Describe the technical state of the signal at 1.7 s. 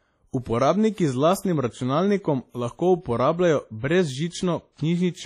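At 1.7 s the speech carries heavy, ringing, washy transform-codec smearing with breathing hiss and nothing above 14.5 kHz, likely WMA compression at a low bitrate near 32 kbps, present throughout.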